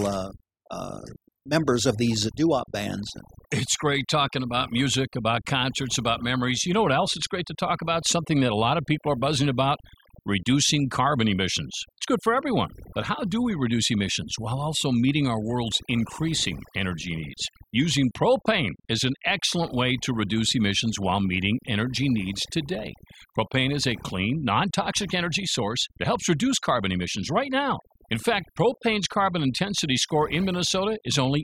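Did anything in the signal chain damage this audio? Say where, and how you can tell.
Yes, and it's in the processing stage: overdone noise removal, running for the whole clip rather than at any one moment. Listen to the gaps between phrases. The background noise floor has dropped and broken up, with little twinkling specks left behind. That's a noise reducer set far too hard, shutting off individual frequency bands whenever they sit near its noise estimate, so the quieter parts of the voice get removed along with the noise.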